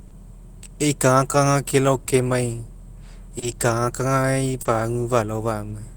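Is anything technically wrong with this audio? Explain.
Yes, there are two timing faults in this speech.

Clock drift between sender and receiver runs through the whole clip. The sender's clock is roughly 2 percent slow, so the jitter buffer keeps draining and the receiver repeats short slivers, producing small hiccups at uneven intervals. On a spectrogram these appear as tiny seams and duplicated fragments.

Short stalls from a late packet occur at 0.08–0.14 s, 2.04–2.10 s, 3.39–3.45 s and 4.62–4.68 s. Each time the buffer ran empty, and the last sound was stretched by 30 ms until the packet arrived. No speech is lost, but a sound is held too long with a slight buzz or dip. On a spectrogram the harmonics run flat, and the waveform repeats near-identical cycles.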